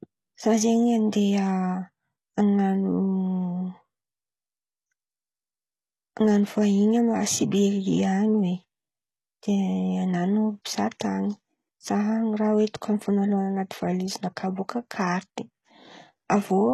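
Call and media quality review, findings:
Throughout: likely HE-AAC compression, low bitrate (fits ~16 kbps). Treble rebuilt by band replication from lower bands, harmonics misaligned. Sibilants gritty, lispy, metallic. Clear codec damage. Nothing above 12.3 kHz.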